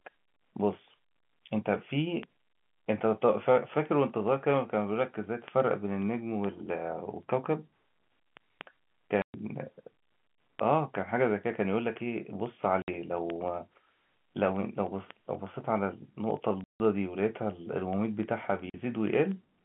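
Packet loss filled with silence cuts the speech at 9.22 s (120 ms), 12.82 s (60 ms), 16.64 s (160 ms) and 18.70 s (40 ms). Each gap is a whole multiple of 20 ms, which fits 20 ms packets. When packets failed to arrive, the receiver played silence in their place. The sound drops out abruptly at hard edges. These gaps stand out against the narrow telephone band of the G.711 line.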